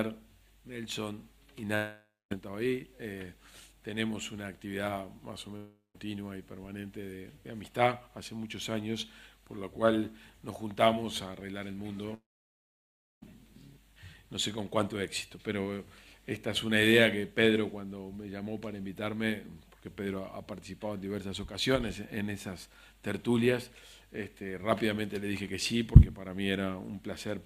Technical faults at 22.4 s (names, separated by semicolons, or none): none